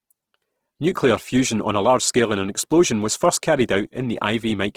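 Throughout, Opus compression, likely near 16 kbps in CELT mode, fills starved bands with folded or noise energy, making the speech plainly rough and grainy.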